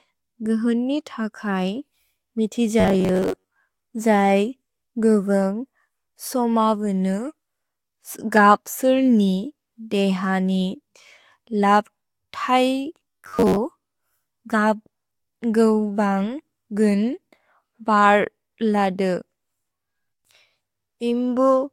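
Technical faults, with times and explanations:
2.80–3.59 s and 13.01–13.58 s, robotic sound from repeated short buffers: the likely cause is audio arriving too seldom, so playback kept looping the most recent fragment, about 10.7 ms long, and skipped most of the real signal during these stretches. Because the same slice repeats over and over, the speech takes on a fixed 93.8 Hz buzz, leaving a flat, metallic drone that only loosely tracks the words.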